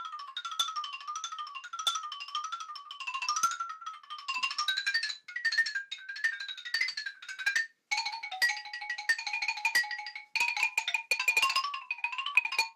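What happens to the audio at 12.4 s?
At 12.35 to 12.39 s, compressed frames are skipped. Several whole frames never reach the output, so the audio jumps ahead by about a tenth of a second, which fits roughly seven 20 ms frames. Overlapping neighbour frames smear the join into a brief blip, not a click.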